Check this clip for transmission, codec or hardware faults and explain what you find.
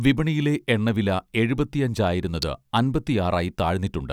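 There's one fault here, a single hardware-side event. At 2.42 s an electrical switching spike hits: a sharp, very brief snap sitting on top of the speech, peaking at roughly -5 dBFS. It's likely a nearby switch or motor arcing, with the audio line picking up that discharge as a sudden click.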